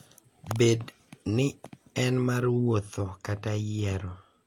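De-emphasis applied wrongly sets in at 2.40 s, just after "ni en", and lasts to the end of the speech. A treble-cut stage meant to reverse pre-emphasis has acted on audio that never had that boost, or has acted a second time, so the response tilts down smoothly toward the top, sitting about 8 dB lower at 10 kHz than at 1 kHz. From that point the voice turns dull and muffled, losing crispness in its consonants.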